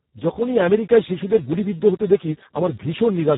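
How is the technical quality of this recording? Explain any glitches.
The quality is poor: heavy Speex codec damage runs through the whole speech clip. The speech sounds hoarse and noisy. At such low quality the codec has too few bits to model the excitation, which fits a bitrate near 4 kbps. A spectrogram would show smeared harmonics.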